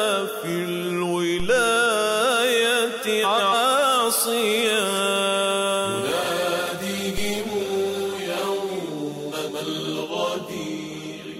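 The audio has two faults. DC steps at 1.40 s and 7.18 s make low thumps: the waveform's zero line jumps, then drifts back, consistent with an offset bled away by a roughly 2 Hz high-pass. Frames out of order from 3.23 to 3.54 s and 9.32 to 9.63 s give a garbled flutter, with blocks of about 140 ms swapped.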